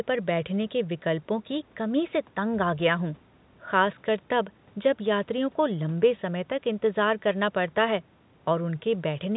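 No technical faults are audible.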